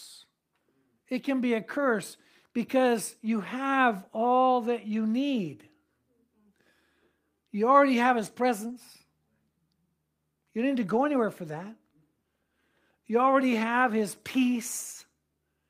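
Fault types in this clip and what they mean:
Short concealed packet loss: around 8.67 to 8.71 s, roughly 20 ms of audio never arrived in time, so the decoder covered about 17 ms of it by carrying the previous sound forward, following its pitch or as shaped noise, then blending back into the real signal. It's very brief, so what you get is a quick smear or wobble right at that spot rather than an audible hole.
Lost packet rebuilt from error correction: lost packets were recovered from the low-bitrate backup copy that the next packet carries (Opus in-band FEC), so nothing drops out, but the rebuilt stretch sounds rougher and noisier than its surroundings. There's a 20 ms patch at 8.69 to 8.71 s, overlapping the concealed loss above, and a longer 80 ms run at 10.81 to 10.95 s, which fits four 20 ms packets.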